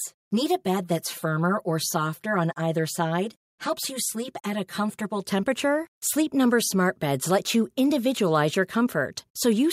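From the start to 5.2 s, one channel arrives about 5 ms behind the other before both are summed to mono. This channel delay causes comb filtering: evenly spaced notches, the first around 100 Hz, make the speech sound hollow and phasey.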